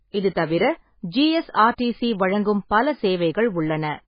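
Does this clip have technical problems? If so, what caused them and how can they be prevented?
Yes. Throughout the speech, nothing is heard above 5.1 kHz, and the remaining sound is heavily damaged: watery, swirling, with smeared onsets and metallic chirps on s sounds. This is likely MP3 compression at a very low bitrate, which fits something near 16 kbps. The encoder ran short of bits, cut the treble and let weak frequency lines flicker between frames. A plain low-pass filter would dull the sound but leave it steady, without the swirl. Encoding at a higher bitrate, or sending the audio uncompressed, prevents this.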